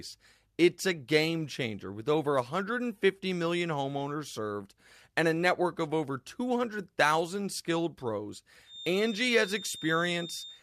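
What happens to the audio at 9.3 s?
A feedback whistle sits under the speech from 8.63 s, after "skilled pros", to the end. A thin 3.6 kHz tone, about 15 dB down, likely comes from a speaker-to-microphone loop.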